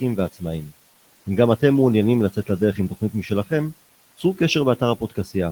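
Speech cut by the noise suppressor occurs at 2.75 to 3.51 s and 5.0 to 5.31 s in this speech clip: the suppressor mistakes quiet speech for the room noise sitting about 22 dB below it, pulling brief fragments down by about 11 dB and about 14 dB, so they sound swallowed.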